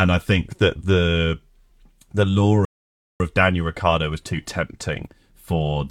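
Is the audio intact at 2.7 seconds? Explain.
No. A rebuffering stall runs from 2.65 to 3.2 s, just after "the lure": the player exhausted its downloaded audio and halted until more data arrived. The speech drops to silence for about 0.55 s, then resumes exactly where it stopped, losing nothing but adding time.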